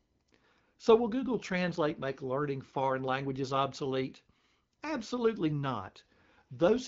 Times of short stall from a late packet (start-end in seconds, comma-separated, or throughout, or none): none